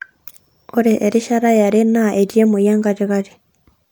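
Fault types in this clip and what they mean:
No faults detected.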